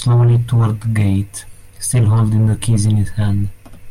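No technical faults can be heard anywhere in this recording, and the signal stays steady throughout.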